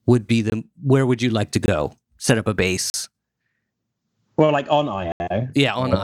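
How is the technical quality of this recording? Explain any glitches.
The recording has four dropouts, each a block of digital silence. They occur at 0.50–0.52 s (20 ms, after "would be" and before "where would you like"), at 1.66–1.68 s (20 ms, after "would you like to"), at 2.90–2.94 s (40 ms), and at 5.12–5.20 s (80 ms, after "like on"). Each time, the output samples were zeroed, most plausibly because the buffer wasn't filled in time. The speech stops and restarts abruptly. The two 20 ms gaps are very short breaks, and the longer ones sound like brief holes. On a waveform each gap is a flat line near zero. On a spectrogram it shows as a blank vertical band.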